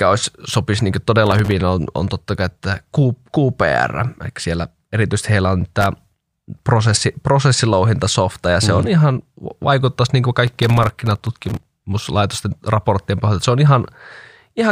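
Processor overload crackle shows up three times in this speech: 1.27 to 1.51 s, just before "on on totta kai"; 5.81 to 6.27 s, between "siellä erityisesti heillä on" and "prosessi prosessilouhintasofta ja se"; and the longest, 10.47 to 11.65 s, right after "ihan vaikuttaisi niin kuin". The machine couldn't fill its tiny buffers in time, each under a couple of milliseconds, so about 15 to about 70 hard-edged dropouts land in quick succession. You hear a gritty, tearing crackle over the voice.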